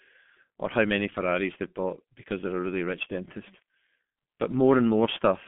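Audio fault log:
throughout, G.723.1 codec: the speech is confined to a telephone band of roughly 150 Hz to 3.4 kHz, with nothing above 3.6 kHz, so it sounds muffled and boxy. Heavy coding damage gives a hoarse, rough texture and smeared consonants. The coder works in 30 ms frames and refits its model of the vocal tract only once per frame, so fast transitions blur. The degree of roughness fits a bitrate around 6 kbit/s.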